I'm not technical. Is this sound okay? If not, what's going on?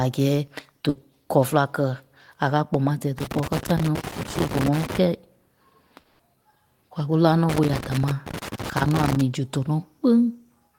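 No, the recording has three kinds of problem.

At 0.89 to 0.97 s there is a burst of packet loss. A short run of data never arrived in time, so the playback stretched the last bit of speech into a brief fading sound for about 60 ms. That held sound covers a piece of speech that was never received, also about 60 ms. Speech resumes with "kɔlɔ féla kɛ a".

From 3.18 to 4.98 s, and again from 7.49 to 9.21 s, there is loose connector crackle. A worn or dirty plug or socket somewhere in the cable path kept losing and regaining contact. Each flicker chops the signal and can add a small pop, so you hear irregular scratching and crackling layered over the speech for nearly two seconds each time.

From 5.99 to 6.21 s the speech stops and the last sound hangs on, fading, for about 200 ms. It never drops to silence before the speech returns, and roughly 200 ms of speech is simply gone. This is likely a long network dropout, where the connection briefly stopped delivering any audio and the player filled the gap with what it last had.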